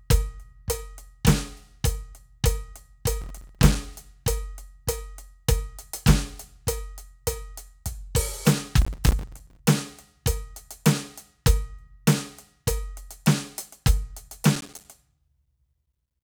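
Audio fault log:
3.21–3.75 s, 8.82–9.59 s, 14.56–14.85 s: processor overload crackle. Missed buffers of about 5 ms each drop to silence, giving gritty tearing that shows as dense broadband vertical streaks and waveform dropouts.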